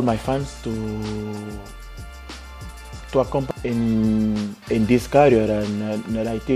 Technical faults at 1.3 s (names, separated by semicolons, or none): none